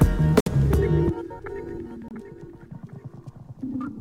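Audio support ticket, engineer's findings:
Two short dropouts to dead silence, audio resuming after each. First at 0.40 to 0.48 s, about 58 ms silent; second at 2.08 to 2.12 s, about 25 ms silent. Bluetooth stall, likely cause: radio interference delaying packets on the wireless link, headphone receive buffer running empty, playback halting until retransmitted packets arrive. Gaps are brief and hard-edged, consistent with buffer underrun rather than a source-side mute.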